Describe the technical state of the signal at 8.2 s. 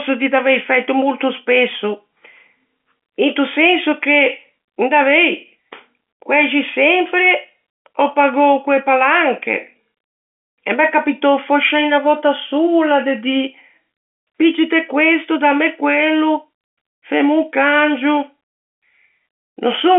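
At 8.2 s the speech is intact, carried cleanly through ordinary G.711 telephone coding that confines it to roughly the 250 Hz to 3.5 kHz line band, with nothing above about 3.7 kHz.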